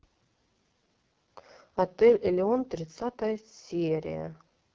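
Speech runs through AMR wideband (HD Voice) coding for the whole clip. It sounds rough and raspy, and the heavy damage fits the lowest 6.6 kbit/s mode.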